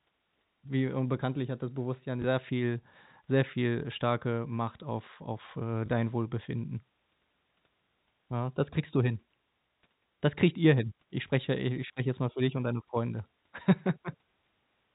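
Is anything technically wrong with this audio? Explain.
Yes. The speech has packet loss with the last packet repeated, three times: 2.22–2.24 s just before "sehr viel sehr viel", 5.86–5.88 s just after "auf auf äh", and 11.88–11.90 s between "spreche ja i ich" and "jetzt mal für dich". Each time one 20 ms packet went missing and the receiver replayed the previous one. Each gap is a small blip. The band-limited sound, with nothing above 4 kHz, fits G.711 A-law telephone coding at 64 kbps.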